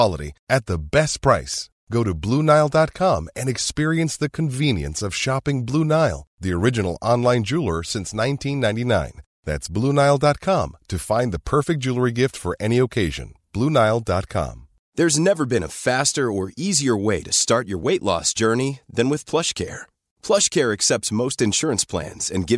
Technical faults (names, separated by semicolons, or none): none